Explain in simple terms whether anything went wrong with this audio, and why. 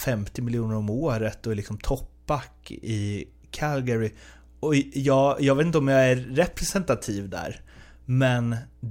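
A mains hum runs under the speech from start to finish: a steady, low 60 Hz tone from the power line leaking into the recording, quiet beside the speech. Unlike wind or handling rumble, it never wavers in pitch or loudness.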